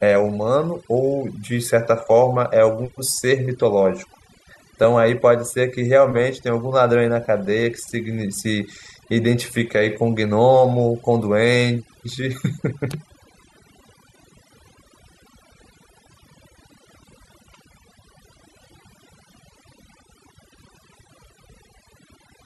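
Overdone noise removal runs through the whole speech clip. A noise reduction stage set too aggressively pulls individual frequency bands down whenever they sit near its noise estimate, so the background drops and breaks up into twinkling specks, while quieter parts of the voice are stripped away.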